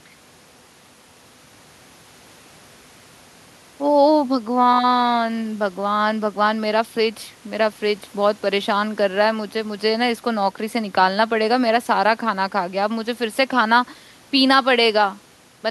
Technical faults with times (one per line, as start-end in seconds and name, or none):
none